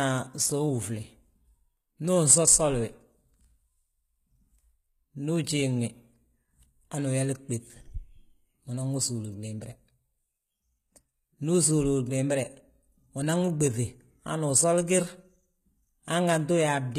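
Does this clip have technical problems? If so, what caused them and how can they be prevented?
Yes. The speech carries HE-AAC compression damage throughout, and it is plainly audible. The upper spectrum sounds synthesized rather than captured: s sounds come out gritty and lispy, with a metallic sheen, because the treble is likely rebuilt by spectral band replication from copied lower bands. The roughness fits a very low bitrate, around 20 kbps. A spectrogram shows nothing above 15.6 kHz and smeared, repeated-looking treble texture. Encoding at a higher bitrate with plain AAC prevents this.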